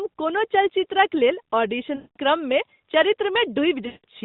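Lost AMR speech frames at 1.96–2.17 s, just after "कोनो चलचित्रक लेल", and 3.86–4.05 s: the decoder repeats the last good pitch and vocal-tract settings with falling gain. Speech stretches into a fading buzz, seen as flat harmonics tapering to silence below the 4 kHz ceiling.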